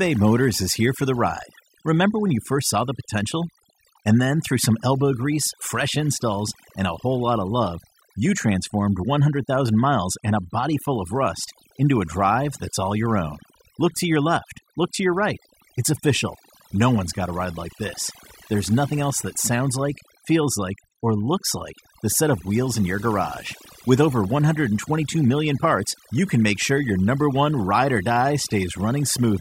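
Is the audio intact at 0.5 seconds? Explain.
No. At 0.5 seconds the speech is already affected by overdone noise removal, which runs through the whole clip rather than starting at a particular point. The noise reduction is set so aggressively that any frequency band sitting close to the estimated noise level is pulled far down or shut off. Quiet detail in the voice is removed along with the noise. What remains is a near-silent background scattered with twinkling specks. On a spectrogram the gaps between syllables show as dark, empty regions dotted with isolated bright flecks. The upper and fainter parts of each voiced segment also look patchy and broken up.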